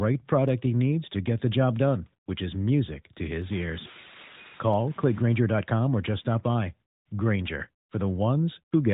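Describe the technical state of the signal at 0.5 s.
A single sharp click lands at 0.49 s, just before "he needs to get", over audio already limited below 4 kHz by the AMR narrowband mobile codec. It is likely dropped samples: a fraction of a millisecond vanishes, so the waveform jumps abruptly.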